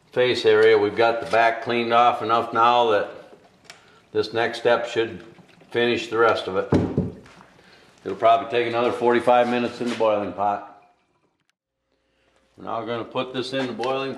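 Nothing is technically wrong with the clip.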